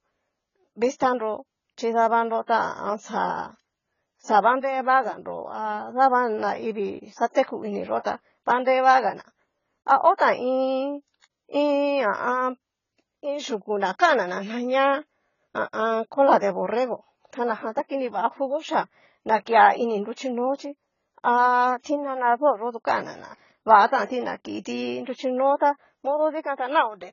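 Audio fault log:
Throughout: AAC compression. Nothing comes through above 7 kHz, so the speech sounds dull and smeared, likely from heavy AAC-LC coding at a low bitrate around 16 kbps.
10.17–10.20 s, 21.83–21.86 s, 23.87–23.91 s: pre-echo. A short hiss lasting 25, 26 and 42 ms creeps in ahead of each sharp onset, as the codec spreads its block noise before the attack.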